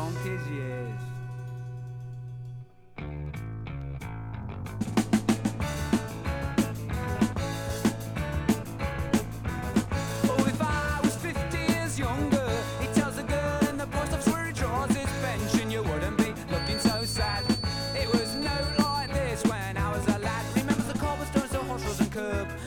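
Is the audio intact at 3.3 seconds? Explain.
Yes, the audio is intact at 3.3 seconds, with no dropout, glitch or other fault audible at that moment.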